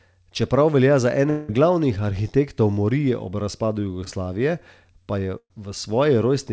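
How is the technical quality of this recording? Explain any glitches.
The recording has three network glitches, all typical of a call link. Its sound also stops at 8 kHz, which fits a wideband call codec such as G.722.

Long network dropout, 1.30 to 1.50 s, right after "velja za". For about 180 ms the real signal is absent. What fills the gap is the last sound drawn out into a buzzy or hissy, fading smear, with no true silence. Speech then resumes at "glavnih arhitektov morije ob", with that stretch gone. The likely cause is a stall in the network stream long enough that the receiver had nothing new to play and had to improvise.

Short concealed packet loss, 4.04 to 4.08 s, just after "arhitektov morije ob razpadu". Roughly 20 ms of audio never reached the decoder in time. The receiver patched the hole by extending the preceding sound and then blending back into the real signal. The result is a brief smear or wobble rather than a gap.

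Burst of packet loss, 5.38 to 5.52 s, after "pa je". About 120 ms of consecutive audio was lost or arrived too late. The receiver carried the last sound forward while turning it down, so it becomes a fading held buzz or hiss. The final 60 ms or so of the gap falls to silence before speech resumes further on, with the missing portion skipped.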